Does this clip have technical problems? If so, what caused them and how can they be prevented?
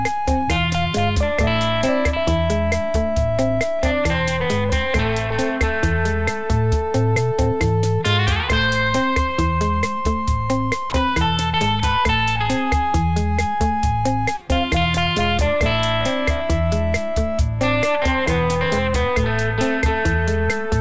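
Yes. At 10.9 s the sound drops out for about 20 ms and is briefly replaced by soft steady noise. This is likely sound dropped by the voice detector, with comfort noise filling the gap. Lowering the detector's threshold or adding hangover time prevents it.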